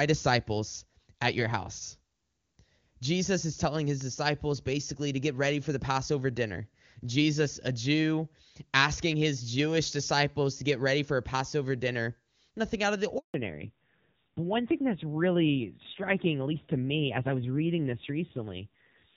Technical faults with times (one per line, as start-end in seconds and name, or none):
13.18-13.34 handover gap
13.34-19.16 fallback to narrowband